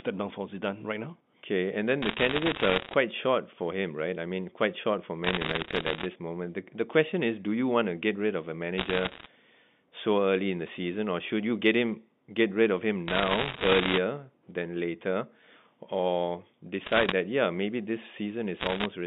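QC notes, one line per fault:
2.02–2.94 s: bit errors on a digital phone line, crackle from an error rate around 2%. Each flipped bit spikes one sample, while the speech underneath never drops out as it would with packet loss.
5.24–6.06 s, after "mean quite short for": bit errors on a digital phone line, sharp ticks at roughly 1.5%. The speech stays continuous, so these are single corrupted samples rather than gaps.
8.78–9.26 s, after "get rid of a": bit errors on a digital phone line, scattered ticks at about 1.5%. These are clicks laid over intact speech, unlike the muffled smearing of codec damage.
13.08–13.98 s: bit errors on a digital phone line, crackle at roughly 2%. Sign and high-order bit hits give loud clicks, and the speech keeps going without gaps.
16.86–17.12 s: bit errors on a digital phone line, a brief tick burst near 1.5%. Each error touches only one sample, so there is no muting or repeated sound.
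18.60–18.85 s, after "that yeah maybe this": bit errors on a digital phone line, short crackle at about 1.5% on the G.711 mu-law line, whose band stops near 3.6 kHz.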